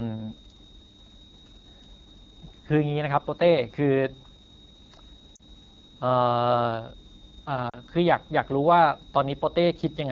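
A switching power supply is running in an audible burst mode or beating with another supply, leaving a thin high whistle that drifts between 3.7 and 3.79 kHz, roughly 30 dB below the speech, present for the whole clip.

The speech has been squeezed through the AMR wideband (HD Voice) codec at one of its lowest rates, consistent with the 8.85 kbit/s mode. Its pulse-driven vocal tract model struggles at that rate, so the speech sounds plainly rough and raspy throughout, with a noisy, synthetic upper band.

At 5.35 to 5.42 s and again at 7.69 to 7.78 s, radio errors corrupted speech frames, which fits two lost 20 ms frames each time. The decoder patched each 40 ms gap by repeating the last good settings at falling gain, heard as a drop to near silence before the speech returns weak or rough for a moment.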